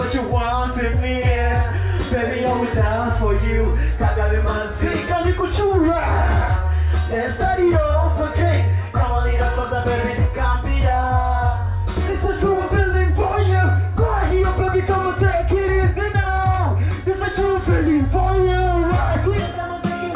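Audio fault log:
No faults heard anywhere in the recording.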